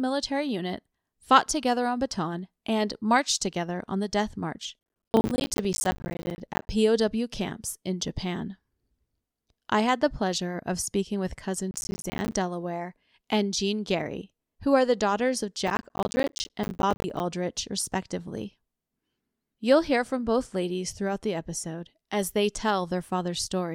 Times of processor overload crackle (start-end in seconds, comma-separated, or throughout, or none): 4.79-6.69, 11.71-12.33, 15.67-17.20